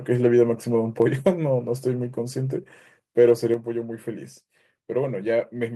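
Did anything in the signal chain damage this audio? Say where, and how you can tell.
Yes. At about 3.54 s the whole recording drops by about 5 dB in a single step, with the speech and the background falling together and staying down. That's the signature of the microphone volume stepped down at the call-processing stage: the software's input gain control most likely judged the mic too hot and pulled the device's input level in one move, rather than easing it down smoothly as a compressor would.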